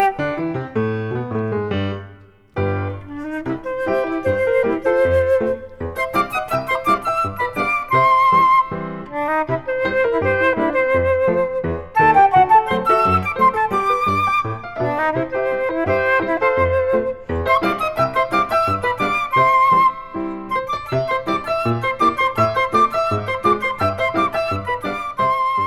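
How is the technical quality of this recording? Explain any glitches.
The recording has one fault, confined to the opening. From 0 to 6.98 s, pre-emphasis is left on: the CD-style 50/15 µs treble boost was never undone, leaving 10 kHz about 8 dB hot, so the sound turns thin, bright and sibilant.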